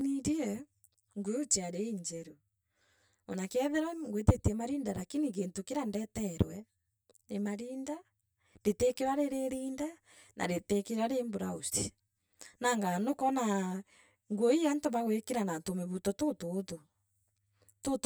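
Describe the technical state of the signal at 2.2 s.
At 2.2 s the speech carries channel delay (comb filtering), present throughout the clip. One channel lags the other by around 10 ms before the mono sum. Shared content cancels at regular notches, the first near 50 Hz. The result sounds hollow and phasey.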